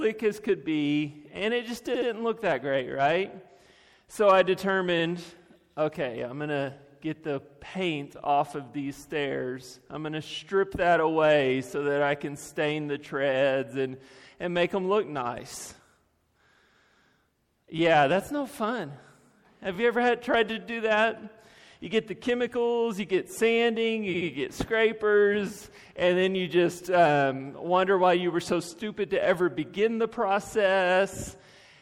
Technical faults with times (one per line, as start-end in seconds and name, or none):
0.00-31.82 MP3 compression
1.93-2.08 repeated frames
4.98-5.03 repeated frames
19.74-19.77 repeated frames
24.13-24.28 repeated frames